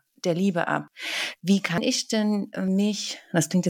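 At 0.88, 1.78 and 2.68 s the speech skips forward, each time losing roughly a tenth of a second, with the two sides butted together: audio missing between chunks, likely from one-second processing blocks dropping material at each handover. Spectrogram and waveform show abrupt seams where harmonics and envelope jump discontinuously.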